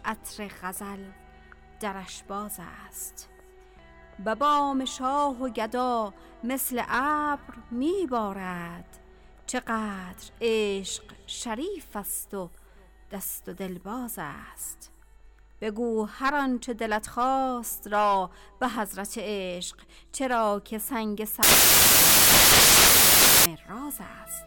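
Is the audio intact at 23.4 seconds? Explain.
No. From 21.43 to 23.46 s the samples are built from the wrong bytes: low-order bits land in the high positions, producing loud, harsh broadband noise.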